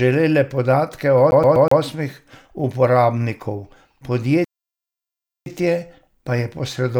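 From 1.31 to 1.81 s, a CD stuck on one turn repeats a 0.12 s fragment four times, each jump muted briefly, an even, mechanical stutter, not random dropouts. At 4.45 s a playback stall silences the speech for about 1.02 s until 5.46 s, likely from starved or blocked playback, leaving one clean gap with no repetition.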